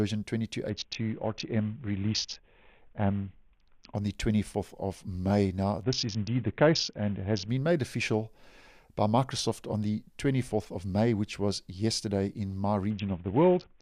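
A Bluetooth SBC bit pool drop, most likely from a congested link, occurs at 0.69–3.95 s, 5.84–7.49 s and 12.90 s to the end, dulling the treble and adding gritty noise. The sound fits a bit pool cut from 28 to about 5, near 54 kbps.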